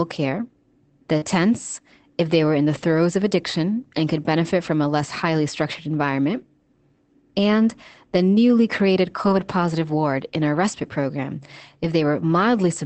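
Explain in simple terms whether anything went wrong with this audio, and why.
Short concealed packet loss at about 1.17 to 1.24 s: roughly 40 ms of the speech never arrived in time. The receiver covered the hole by stretching the sound just before it, then eased back into the real audio, so you hear a quick smear there.

Lost packet rebuilt from error correction happens at 1.22 to 1.24 s, 2.74 to 2.84 s after "they were in the", 4.46 to 4.48 s before "from a less highly", and 9.26 to 9.44 s before "positive ward in our". Each time, the next packet carried a rough backup copy, so nothing drops out, but those stretches sound grainier and noisier.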